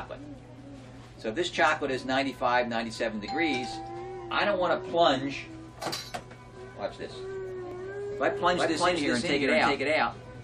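At 3.73 s and again at 7.71 s, an overlap between stream segments cuts about 17 ms of sound and the waveform jumps. Unlike a dropout, no silence is inserted. The 4 s spacing fits overlapping segment timestamps.

From 8.30 s to the end, a doubled audio track follows roughly 0.4 s behind at about equal level, likely from a slower second capture path or an edit holding two copies. Unlike an echo, it starts abruptly and has no decay.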